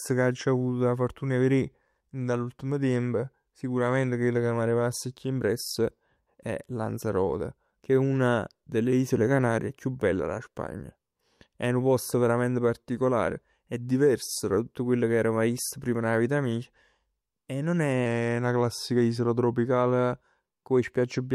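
From 13.78 to 14.39 s, after "post veramente particolare è", and from 18.06 to 19.65 s, after "e non", the speech slows by 5.6% and drops nearly a semitone before snapping back, likely a drift correction step briefly lowering the playback rate.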